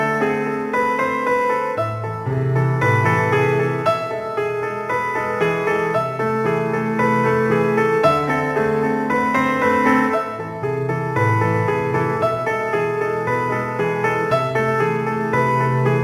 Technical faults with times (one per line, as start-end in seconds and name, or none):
none